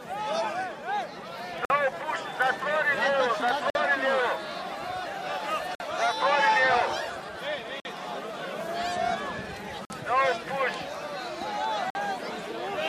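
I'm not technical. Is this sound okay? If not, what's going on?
No. There's a gap between chunks: the sound seems delivered in pieces about 2 seconds long, with a 50 ms hole at each join, at 1.65, 3.7, 5.75, 7.8, 9.85 and 11.9 s. Nothing's missing; it just stutters.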